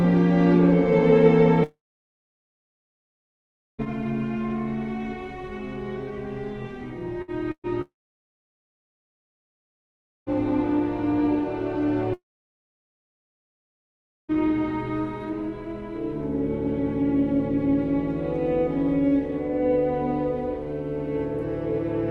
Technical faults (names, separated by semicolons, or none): long network dropout; scattered short gaps